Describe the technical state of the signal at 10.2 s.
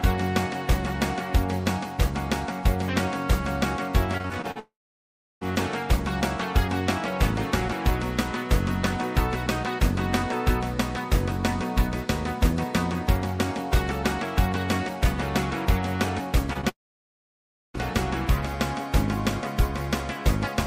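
At 10.2 s the signal is intact, with no fault audible at that moment.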